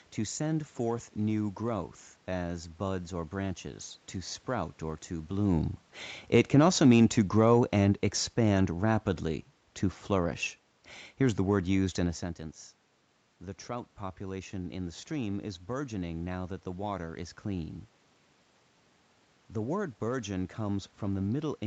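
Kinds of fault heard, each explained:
Automatic gain falling: the automatic gain control judged the input too loud, or its background noise too strong, and lowered its gain gradually, starting just after "to sprout or to" at 5.35 s and settling by 11.88 s, before "in a". The speech begins loud and then sinks by about 6 dB over those six and a half seconds. The room noise sinks along with it, which sets this apart from the talker moving around 5.5 s and 12 s.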